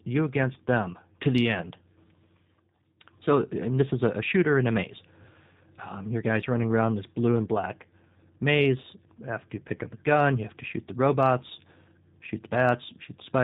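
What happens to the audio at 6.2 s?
At 6.2 s, as across the whole clip, the speech carries G.729 codec damage. The codec rebuilds each 10 ms frame from a vocal tract filter, a pitch predictor and a few pulses. Nothing above 4 kHz survives. The voice sounds rough and synthetic, which fits an 8 kbit/s stream.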